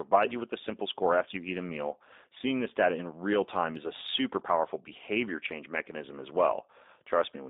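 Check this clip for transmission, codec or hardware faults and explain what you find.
One codec fault runs through the whole clip.

Throughout, the speech sounds slightly rough and synthetic, confined to roughly 250 Hz to 3.7 kHz. That is plainly audible G.729 codec damage: a vocal tract filter and sparse pulses rebuild each frame, consistent with 8 kbit/s G.729A.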